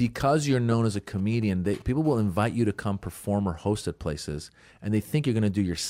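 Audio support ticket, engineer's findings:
GSM signalling bursts, 0.95 to 1.91 s: nearby 2G handset sending short signalling bursts, rectified in the audio circuit. Galloping ticks and brief 217 Hz buzz fragments, roughly 25 dB under the speech.

GSM phone buzz, 2.05 to 3.42 s: nearby 2G handset transmitting in bursts on a call, pulses rectified by the audio path. Steady raspy 217 Hz buzz, rich in harmonics, about 35 dB below the speech.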